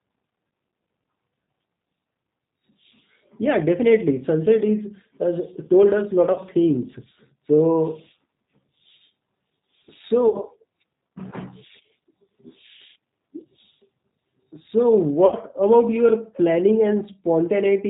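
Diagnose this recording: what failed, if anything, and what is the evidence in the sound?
Codec stage: the call was carried by the G.729 codec, here the G.729A variant at 8 kbit/s. It rebuilds the speech from a vocal tract filter and a few pulses per frame, so nothing above 4 kHz survives and the voice sounds plainly rough and synthetic throughout.

Network stage: packets were lost and the decoder's concealment filled the gaps by extrapolating its last pitch and filter at falling gain. Short fading smears, a buzzy tone or coloured noise, occur at 6.33–6.38 s and 10.31–10.40 s, each covering about 30 ms of missing audio, which fits one packet. A longer one at 15.26–15.35 s, just before "about your", spans 60 ms and fits two packets. After each gap the speech stays weak briefly while the decoder recovers.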